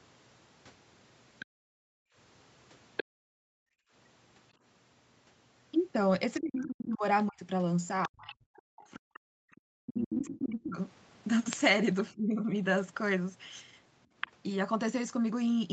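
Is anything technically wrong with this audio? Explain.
Yes. This speech clip has three faults, all tied to echo cancellation.

The other side's voice leaks through at 1.39–1.46, 2.97–3.04, 6.37–8.35, 9.86–10.69 and 14.21–14.31 s. It sits roughly 15 to 5 dB below the speech. The likely cause is loudspeaker echo the canceller failed to remove.

The background is gated by the echo canceller between 1.46 and 3.92 s. The room sound drops by up to about 40 dB for around a second and a half in total, then returns.

Speech is suppressed in double talk between 6.39 and 12.52 s. The talker's voice dips by as much as about 40 dB, in pieces, for roughly four seconds overall. This is likely the canceller turning down both voices when both sides spoke at once.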